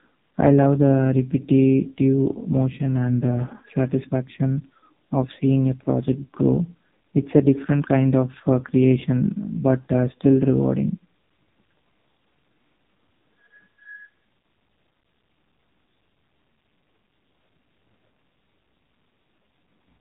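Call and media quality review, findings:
AMR narrowband mobile codec, throughout: nothing above 3.8 kHz, buzzy synthetic speech from heavy vocal-tract-model coding, consistent with a very low bitrate around 5.15 kbps.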